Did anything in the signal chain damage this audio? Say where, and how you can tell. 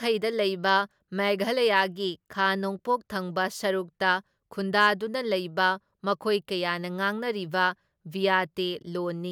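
Yes. Hard clipping, at a converter or sample-format stage, flattens peaks at 1.76–1.81 s, just before "ꯈꯥ ꯅꯣꯡꯄꯣꯛ ꯊꯪꯕ ꯁꯔꯨꯛꯇ", and at 4.79–4.88 s, overdriven by about 1 dB and 2 dB. The brief crackle comes from high harmonics of the sharp flat tops. Soft limiting would sound rounder.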